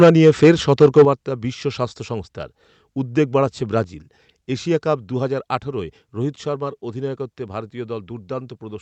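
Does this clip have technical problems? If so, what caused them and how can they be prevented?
Yes. Microphone overload at 0.00 to 0.51 s and 0.81 to 1.03 s, with peaks about 8 dB and 7 dB beyond full scale, likely comes from too much input gain. Waveform peaks are flattened into plateaus on roughly 7% and 15% of samples, with broadband crackle smeared upward on the spectrogram. Lowering the microphone's input gain before speaking prevents it.

Microphone volume stepped down at 0.04 s, 1.05 s and 3.84 s, by about 2 dB, 6 dB and 4 dB. Each step is likely automatic gain control lowering the microphone's input volume. The waveform envelope drops abruptly, and the whole spectrogram dims at once. Setting the level correctly beforehand, or disabling automatic gain adjustment, prevents it.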